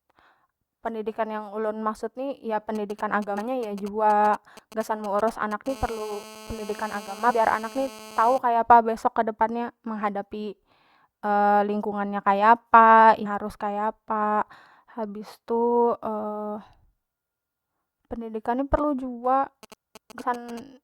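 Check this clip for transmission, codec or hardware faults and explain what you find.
Two kinds of hardware interference from a nearby 2G phone and one codec fault affect this speech clip.

GSM signalling bursts occur from 2.75 to 5.68 s, just after "ni ya", and again from 19.63 to 20.59 s. A GSM handset that is not on a call but is exchanging short control messages with the network sends brief clusters of radio pulses. The audio circuitry rectifies them into sound, producing a galloping dit-dit-dit of short 217 Hz buzzes roughly 20 dB below the speech.

A GSM phone buzz follows directly from 5.69 to 8.38 s and stops just before "kaya apa". Once the phone is in a call, it transmits continuously in bursts 217 times a second. Rectification turns that pulse train into a steady, hard, raspy 217 Hz buzz with many harmonics, about 18 dB below the speech and unrelated to it.

Compressed frames were skipped at 13.25 s, just after "lingkungan nya kaya apa", and at 20.20 s. 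Here the decoder did not play whole blocks of the compressed stream, either because they were missing or because they were rejected as damaged. The first jump loses something like 150 ms, which fits about seven 21.3 ms frames. The second loses about 100 ms, or around four frames.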